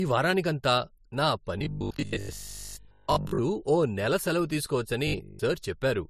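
A speech recording that was likely passed through a lossy codec more than once, an AAC-style encoding followed by MP3, with the final pass sounding like a low bitrate around 47 kbit/s. This is transcoding between lossy codecs: the second encoder wastes its limited bits reproducing the first codec's artefacts, then adds its own, so two layers of smearing and swirly high-frequency artefacts sit on top of each other throughout. Nothing remains above 15 kHz, which gives the top end a dulled, closed-in quality. On two occasions, new audio also likely arrived too slowly, and playback filled the gaps by repeating the most recent short buffer. The 50 Hz buzz fits a 20 ms buffer. The result is robotic sound from repeated short buffers: most of the real audio in those stretches is replaced by loops, leaving a rigid metallic drone that only loosely tracks the speech. The first occurs from 1.59 to 3.39 s, between "వారానికంతా నా" and "ఓ నెల సెలవు", and the second is a brief burst from 5.07 to 5.39 s.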